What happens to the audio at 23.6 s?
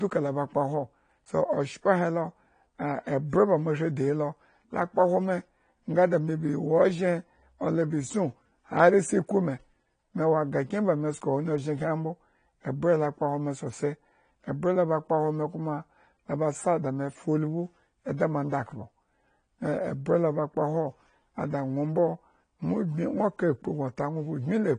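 AAC compression runs throughout, including 23.6 s: the speech is dull and smeared with nothing above 9.8 kHz, likely from AAC-LC coding at a low bitrate around 32 kbps.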